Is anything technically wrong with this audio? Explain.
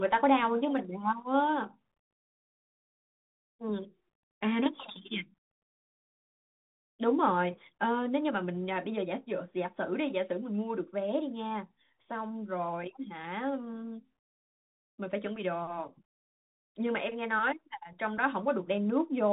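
Yes. The speech passes through a Bluetooth CVSD headset codec for its whole length: nothing above about 4 kHz survives, which fits a 64 kbps CVSD link. Each sample is coded as a single up-or-down step of adaptive size, so loud high-frequency sounds outrun the step and distort. S sounds turn scratchy, and a granular hiss sits under the speech. Plain band-limiting would sound muffled but clean, without that grit and overload.

Single sharp clicks at 0.78 s and 8.84 s are most likely dropped samples. A couple of samples go missing, so the waveform jumps abruptly to a later value. The loss is far too short to remove any sound, so there is no audible gap as in a dropout, only the click.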